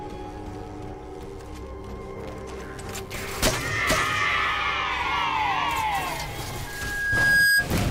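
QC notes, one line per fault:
6.67–7.67 s: loudspeaker feedback squeal. A single tone near 1.6 kHz rises out of the sound and swells over roughly the first 0.7 s. It ends up loud, about 10 dB above the programme. The microphone is hearing the loudspeaker it feeds. At this one frequency the loop returns more than it sends, so each pass round the loop makes the tone stronger. The squeal lasts about a second.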